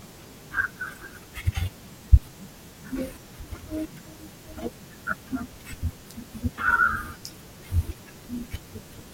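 No technical faults can be heard anywhere in the recording.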